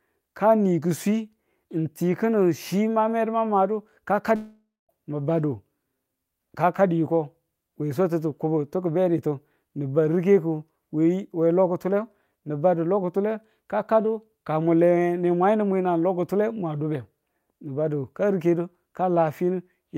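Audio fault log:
4.35–4.91 s long network dropout: speech smears into a decaying buzz, then a 0.23 s flat gap with a blank spectrogram. The likely cause is 0.54 s of audio lost in transit.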